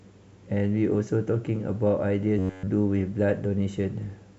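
From 2.39 to 2.68 s the speech turns into a rigid metallic buzz at 93.8 Hz. This robotic sound from repeated short buffers likely comes from one 10.7 ms block being replayed throughout.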